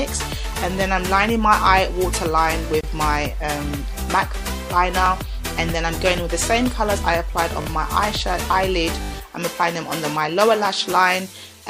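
Throughout the audio there is plainly audible watery, swirling degradation, with dulled treble and smeared attacks, likely from MP3 compression at a low bitrate; the damage fits roughly 64 kbps, where the encoder drops high frequencies and lets weak spectral detail flicker between frames. At 2.81 s a gap at a join of encoded pieces cuts a 27 ms silence into continuous sound, with softened edges. The padding and start-up delay of two separately encoded segments were left in, and the audio resumes where it stopped. Repeated buffers follow, each replaying the same 20 ms piece with hard joins: once at 5.06 s, twice at 7.62 s, and four times at 9.02 s. The playback device ran out of fresh audio and reissued its last buffer, producing brief stutters.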